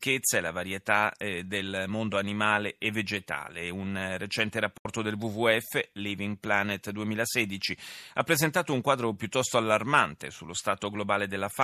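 At 4.78 s, just after "eh recente", the speech drops out abruptly. This is a digital broadcast dropout. The receiver stopped getting usable frames and muted its output until valid data returned. The sound fades to silence in about 3 ms, so it reads as a clean cut rather than a click. The gap lasts until 4.86 s, roughly 72 ms of missing audio, which points to a few lost frames. That stretch of speech is gone, and the sound then returns.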